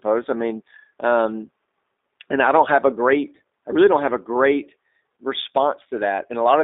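The speech has passed through a G.729 codec, whose rough, buzzy texture fits the 8 kbit/s G.729A variant. It rebuilds each 10 ms frame from a vocal tract filter, pitch predictor and a few pulses, so voicing sounds plainly synthetic and the band is held to about 250 Hz to 3.7 kHz throughout.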